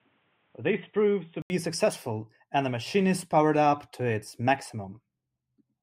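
For the first 1.5 s the speech sounds dull and boxy, with nothing above 3.8 kHz, a bit quieter and with a faint noise floor. Then there's an 80 ms gap and it opens up. Likely an input switched to a poorer device, then back.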